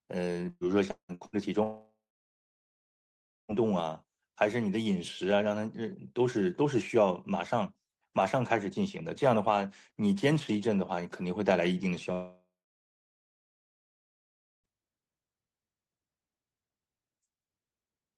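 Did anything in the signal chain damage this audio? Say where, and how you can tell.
Yes. From 0.49 s to 1.36 s the speech turns choppy and robotic, with four short holes, each one papered over. The longest hole is 179 ms, and about 0.42 s of audio is missing in total, so nearly half of that stretch is synthetic. This is repeated packet loss at the network stage. Packets kept failing to arrive in time, and the receiver's concealment stretched the last good sound across each gap before the next one hit.

Two long network dropouts follow. The first runs from 1.63 s to 3.56 s and the second from 12.12 s to 14.67 s. Each starts with a brief buzzy continuation of the preceding sound that fades within a few tenths of a second, then falls to silence: about 1.5 s of it the first time and about 2.15 s the second. When the speech returns, it picks up further on, with roughly 1.9 s and 2.5 s of material gone. 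This is likely a network stall in which no packets reached the receiver, so its concealment ran out and the lost audio was never recovered. The audio otherwise reflects the Opus call codec at 32 kbps, which band-limits it at 12 kHz.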